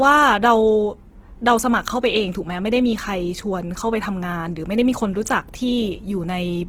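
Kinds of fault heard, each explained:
Opus compression: The speech sounds grainy and rough throughout, with a noisy, sandy texture over the voiced sounds, and the damage is plainly audible. That graininess, which fits a low rate near 16 kbps in the codec's full-band music mode, is likely from Opus filling starved bands with folded or noise-like energy. Unlike MP3 there is little swirling or hollow warble, and the top end is not dulled, since content reaches about 20.2 kHz.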